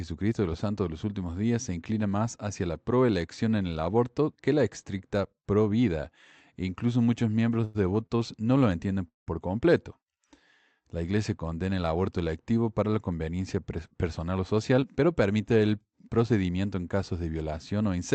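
Around 7.64 to 7.76 s there's a call audio freeze: the last sound carries on as a fading buzz for about 100 ms, then picks up right where it left off. Nothing's lost, it's just a gap pushed in, likely from packets held up so the jitter buffer ran dry.

Right after, at 8.06 to 8.12 s, comes a short stall from a late packet. A sound is stretched for about 36 ms with a slight buzzy dip, then continues from the same spot.

The second freeze runs from 9.08 to 9.29 s, around 185 ms. This time the held sound dies away and you get about 150 ms of silence before the audio resumes intact.

From 13.76 to 15.25 s there's a jitter buffer speed-up. The receiver trims tiny pitch-period slices over and over, shaving roughly a tenth of a second. So the speech runs about 7% fast at the same pitch and feels a bit hurried. All of this rides on the Opus call path, where the top end stops around 8 kHz.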